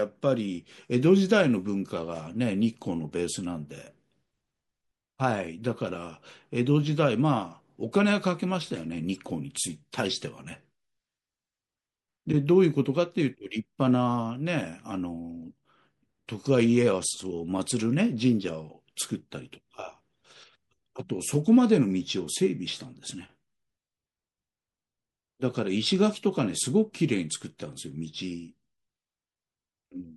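Across the whole speech clip the sound is watery and swirly. S sounds chirp metallically. This is likely MP3 compression at a low bitrate, near 64 kbps. Starved of bits, the encoder drops weak frequency lines that flicker between frames.

From 9.14 to 9.19 s comes a brief burst, fairly quiet at about -35 dBFS. It spans a few frames. From 12.32 to 12.34 s a single louder blip follows, at about -20 dBFS. Both are corrupt frames decoded anyway. Flipped bits put energy at wrong frequencies.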